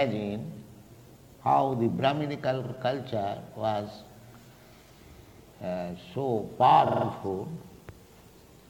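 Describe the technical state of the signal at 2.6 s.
Repeated frames from 2.60 to 2.70 s: a block of about 46 ms, fitting a single compressed frame, plays twice more, adding 93 ms. It sounds like a brief stutter, and the waveform shows that same shape tiled consecutively.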